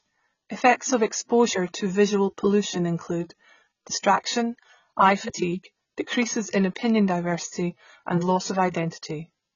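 From start to finish, the speech carries heavy AAC compression damage. Nothing is heard above 7 kHz, so the top of the spectrum is simply gone and the sound turns dull. The coder has too few bits to spend. It drops spectral detail and smears what remains. Sibilants come out fizzy. Sustained sounds warble. The cause is likely AAC-LC coding at a very low rate, which fits a bitrate around 16 kbps.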